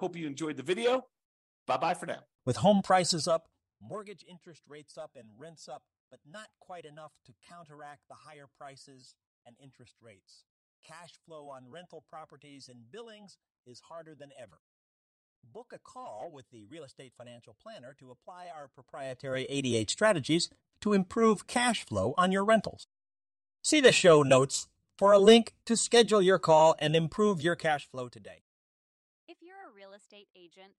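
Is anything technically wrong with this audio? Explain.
Yes, there is zipper noise in this speech at 2.80–4.22 s and 27.43–28.55 s as the level drops by roughly 25 dB, and at 18.68–19.77 s as it rises by about the same amount. The gain moves in 1 dB jumps about twenty times a second with no smoothing, so each jump leaves a tiny click. Unlike a clean fader move, the level change carries an audible ticking or zipping texture.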